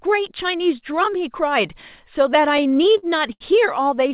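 From 2.42 s to 3.42 s the speech shows repeated stalls (stutter): ten short gaps in which packets arrived late and the jitter buffer ran dry, so the receiver stretched the last sound to bridge each wait. Together these fills cover about 199 ms, a fifth of that second, with the longest at 79 ms. Nothing is actually lost, but the speech drags and catches. It sits over a telephone-band path with nothing above 4 kHz, which points to G.711 mu-law at 64 kbps.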